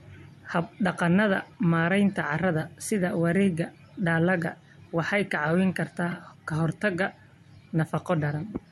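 Repeated frames at 6.10 to 6.13 s in this speech: one 26.1 ms block, which fits a single compressed frame, plays twice, causing a brief stutter and lengthening the audio by 26.1 ms.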